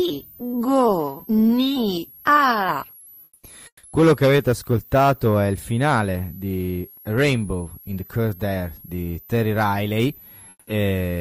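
A switching supply whistle runs throughout, a high tone drifting between 10.6 and 13.6 kHz, around 25 dB below the speech, from a switching power supply. Comfort noise replaces the background at 3.23–3.43 s, 3.67–3.83 s and 10.49–10.67 s. The real background gives way to steady, featureless noise about 7 to 10 dB quieter, likely discontinuous transmission such as Opus DTX.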